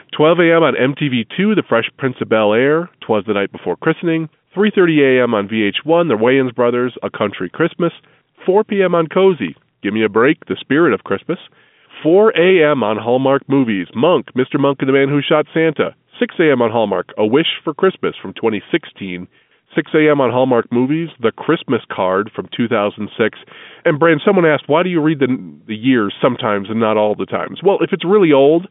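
No technical faults can be heard in this speech recording.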